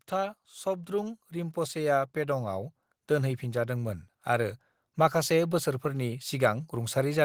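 From 0.05 s to 2.79 s the speech shows automatic gain rising: the gain control judged the input too quiet and raised its gain slowly, by about 7 dB over those 2.7 seconds. Voice and background noise swell together, so the room seems to creep closer, settling just before "दोनहैफिनजादोंमोन आरो". On a waveform the envelope widens steadily across the span. On a spectrogram the noise floor brightens along with the speech bands.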